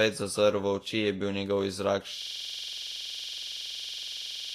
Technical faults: Vorbis compression; system hang loop

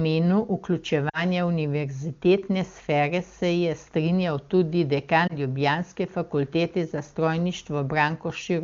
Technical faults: lost AMR speech frames

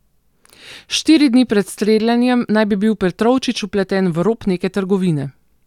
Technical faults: none

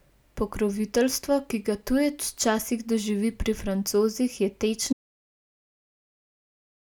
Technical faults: audio dropout to silence

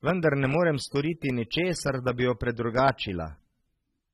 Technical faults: AAC compression

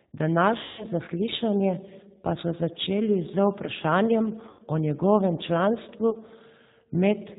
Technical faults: G.729 codec; VoIP packet loss concealed by the speech codec

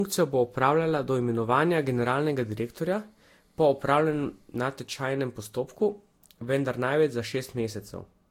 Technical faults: generation loss

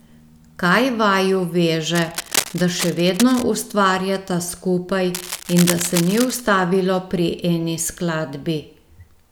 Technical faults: cable scratch noise

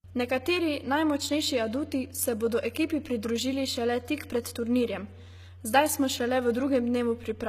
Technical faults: HE-AAC compression

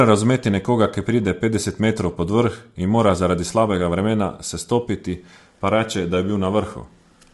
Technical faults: low-delay AAC compression

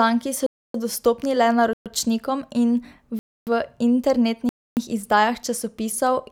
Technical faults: block of digital silence

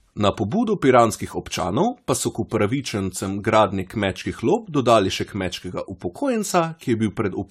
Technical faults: generation loss

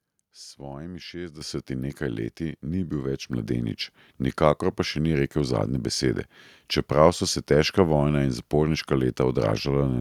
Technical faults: microphone volume stepped up

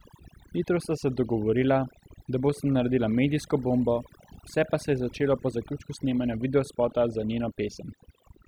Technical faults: overdone noise removal

